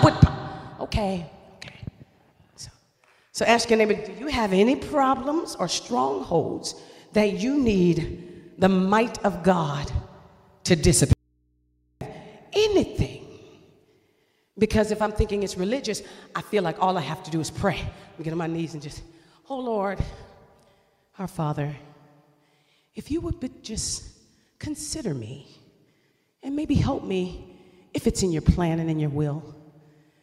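At 11.13 s the sound cuts out abruptly. It returns at 12.01 s, so about 0.88 s is lost. This is an audio dropout to a faint residue. The gap is not silent. It holds a low mains hum, roughly 45 dB below the normal level. The cut is sudden at both edges, with no fade. The wanted signal was likely lost upstream while the input after the break stayed live and picked up hum.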